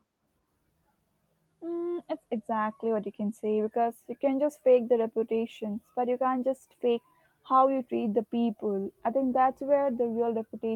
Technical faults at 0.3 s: none

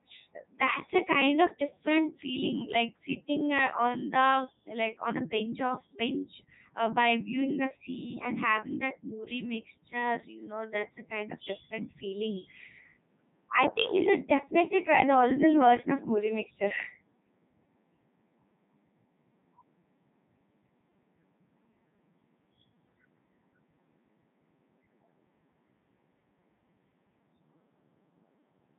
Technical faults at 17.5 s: Codec 2 vocoder

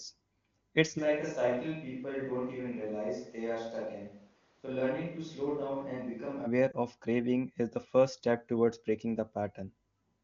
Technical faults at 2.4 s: switch to a distant microphone

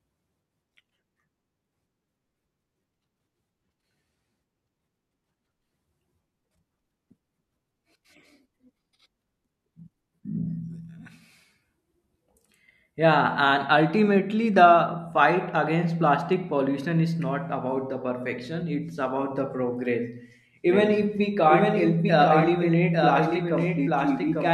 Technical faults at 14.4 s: none

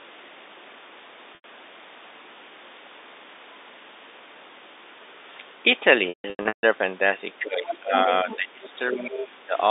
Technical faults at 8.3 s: speech suppressed in double talk; other side's voice leaking through

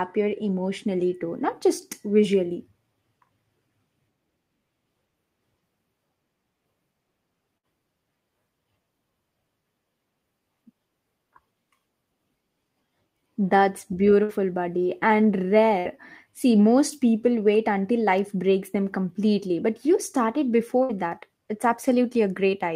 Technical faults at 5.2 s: none

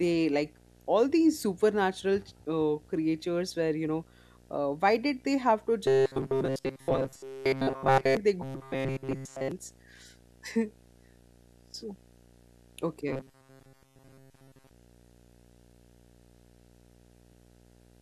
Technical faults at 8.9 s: video or display buzz; robotic sound from repeated short buffers

